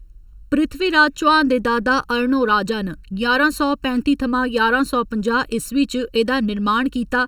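Throughout the speech, there is channel delay (comb filtering). One channel arrives a fraction of a millisecond later than the other, and when the two are summed to mono the shared content cancels at regularly spaced frequencies. The first notch sits around 700 Hz, with further notches repeating about every 1.4 kHz above it. The result is a hollow, phasey tone.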